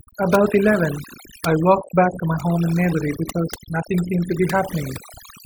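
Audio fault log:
Throughout, overdone noise removal: an over-aggressive noise reducer gates out frequency bands near its noise estimate, leaving a lowered, twinkling background and quiet parts of the voice removed with it.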